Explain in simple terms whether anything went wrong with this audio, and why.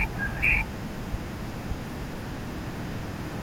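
The speech plays twice at once: a doubled audio track. A second full copy trails about half a second behind, about as loud as the first, for the whole clip. It has no echo fade. The likely cause is the sound being recorded again through a slower path.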